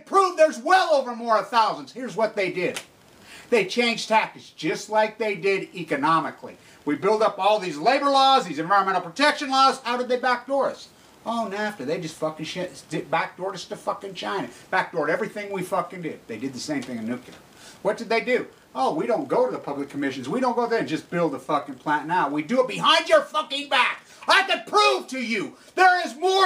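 No technical faults can be heard anywhere in the audio.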